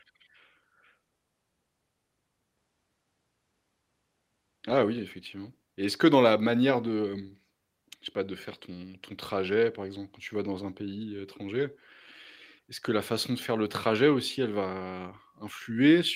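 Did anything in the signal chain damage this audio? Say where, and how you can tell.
No, nothing in the signal chain audibly damaged this speech.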